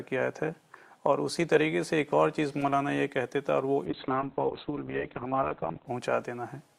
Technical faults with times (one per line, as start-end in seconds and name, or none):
3.87-5.93 call bitrate drop